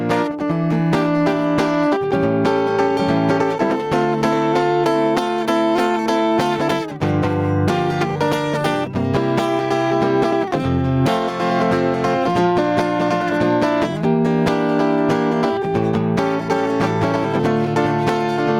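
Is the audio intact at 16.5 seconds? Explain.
No. Gain pumping runs through the whole piece of music, including 16.5 seconds. The level swings by around 15 dB. Loud and soft parts end up closer in level, and the sound is squashed. The likely cause is input gain set far too high, with a fast limiter clamping down.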